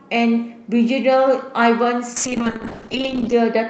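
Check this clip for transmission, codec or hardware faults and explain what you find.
One transmission fault is audible: a call bitrate drop near the end of the speech. From 2.17 s to 3.39 s the coding turns coarse. The call's bandwidth estimate fell, so the encoder got far fewer bits. The sound points to a fall from roughly 32 kbps to around 9 kbps, held for about 1.2 s. The speech sounds rough and watery, and the top end goes dull.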